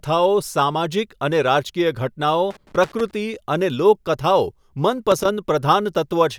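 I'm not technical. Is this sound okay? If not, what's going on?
No. There is loose connector crackle in two spots: from 2.51 to 3.11 s, and from 5.12 to 5.29 s. It sounds like rough scratching over the speech. A worn or dirty plug keeps losing and regaining contact, so the sound gets chopped up.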